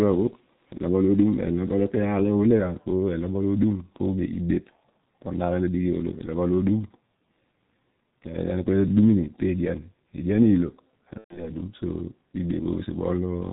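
Speech squeezed through a G.723.1 codec the whole way, and it's a heavy case. Nothing comes through above 4 kHz, so the voice is muffled and a bit hoarse, and consonants smear together because the codec works in 30 ms frames and its model of the voice only updates slowly. That level of damage fits the low 6.3 kbit/s mode. Then there's VoIP packet loss concealed by the speech codec from 11.18 to 11.51 s. The gap sounds like roughly 120 ms of missing audio, which fits four lost frames. The decoder papers over it by carrying forward its last pitch and filter settings and turning the level down frame by frame, so the sound stretches and fades, then goes silent from the third lost frame in a row. Because each frame leans on the one before, the voice stays weak and a bit warped for a short while after real audio returns, which is why the damage runs past the missing stretch itself.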